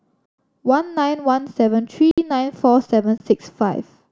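Three blocks of digital silence break into the speech: 0.26 to 0.38 s (128 ms), 2.11 to 2.18 s (64 ms), and 3.18 to 3.20 s (22.5 ms). Each time the sound cuts straight out and snaps back with no fade. The first two are proper holes, and their lengths fit buffers of 2048 and 1024 samples not being filled in time. The last one is much shorter, a brief hole.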